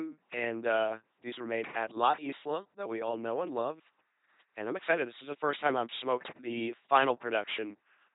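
From start to finish the speech has passed through an LPC-10 vocoder, a 2.4 kbit/s coder that rebuilds each frame from a ten-pole filter driven by either a pulse buzz or noise. The damage is heavy: a mechanical robotic tone, buzz-hiss errors, nothing above 3.8 kHz.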